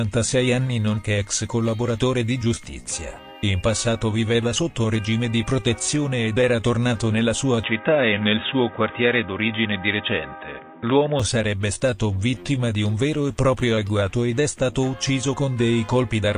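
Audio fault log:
7.63–11.20 s, input switched to a poorer device: the sound abruptly turns dull and boxy, with nothing above 3.8 kHz, then clears again at 11.20 s. This is likely a change to a narrower-band microphone or headset profile. There is no gap at either switch and the level barely moves, so the waveform envelope looks continuous. A spectrogram shows a hard ceiling at 3.8 kHz across the span and a faint new noise floor, roughly 55 dB below the signal.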